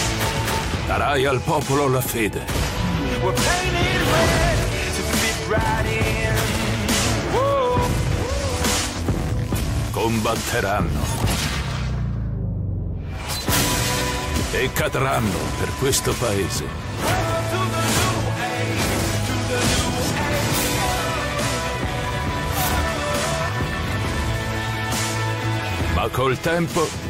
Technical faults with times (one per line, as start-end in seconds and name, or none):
none